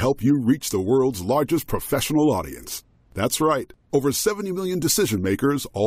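No technical faults can be heard anywhere in the speech.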